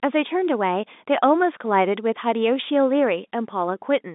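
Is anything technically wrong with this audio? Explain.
No, nothing is technically wrong here: the speech arrives as ordinary G.711 telephone coding, confined to the usual line band of roughly 200 Hz to 3.7 kHz, with no faults present.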